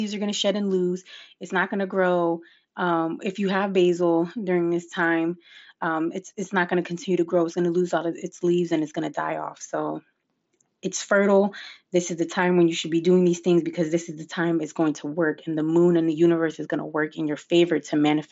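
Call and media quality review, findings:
No faults found: the speech comes through the Bluetooth mSBC headset codec as wideband audio with nothing above about 7.7 kHz and only the light graininess that codec adds on louder passages.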